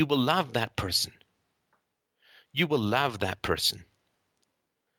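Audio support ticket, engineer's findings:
No technical faults found in the speech signal; levels, continuity and timing hold steady throughout, and no component in the chain needs attention.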